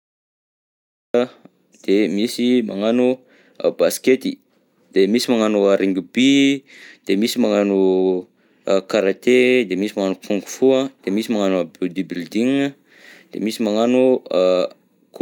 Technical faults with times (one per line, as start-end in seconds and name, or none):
0.00-1.14 cut-off start